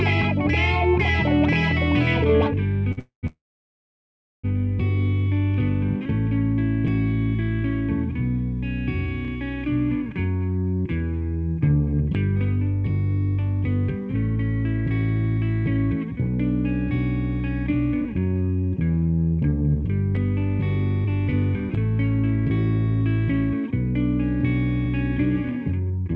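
At 2.92 s a short stall from a late packet holds the sound for 53 ms. The jitter buffer briefly ran dry and the receiver stretched the last fragment, then resumed from the same point with nothing lost.

Two call audio freezes follow immediately, from 2.99 to 3.25 s and from 3.27 to 4.46 s. These are likely caused by packets held up in transit. In each, the final sound decays into silence, about 130 ms and then about 1.06 s, before playback picks up where it stopped, inserting 236 ms and 1167 ms of gap.

Jitter buffer speed-up occurs from 18.02 to 19.75 s at 117%, from 21.04 to 21.72 s at 111%, and from 23.51 to 26.15 s at 117%. The receiver trimmed many tiny pitch-period slices to shed excess buffered delay: roughly a third of a second, under a tenth, and half a second. The audio sounds hurried at unchanged pitch. Throughout, the band-limit to 8 kHz fits a G.722 call path.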